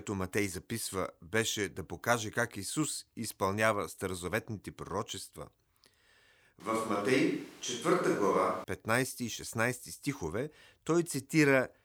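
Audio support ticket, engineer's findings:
Switch to a distant microphone, 6.60 to 8.64 s (about 2 s). Speech abruptly turns roomy and hollow, thinner low end, background noise rising to about 25 dB below the speech. Level roughly unchanged. Abrupt change in and out. Likely cause: close mic dropped out, feed fell back to a far pickup such as the camera mic.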